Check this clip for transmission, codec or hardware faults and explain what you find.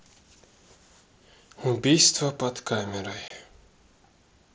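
One fault is present: a brief burst of unconcealed Bluetooth headset packet loss at 3.28 to 3.31 s. Packets carrying the speech between headset and phone failed to arrive, and nothing was synthesised to cover them, so about 22.5 ms of speech is lost. That span fits roughly three consecutive lost packets. The speech cuts out and resumes with hard edges, heard as a short gap. The wideband mSBC link passes speech up to 8 kHz around it.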